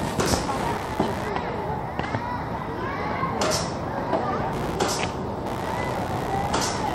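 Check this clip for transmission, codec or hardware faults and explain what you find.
One hardware fault runs through the whole clip: computer activity noise. It is a buzzy, chirping pulse, around 70 times a second, sitting not far below the sound itself. Processor or graphics load shifts the shared ground, so it follows the computer's activity, not the audio.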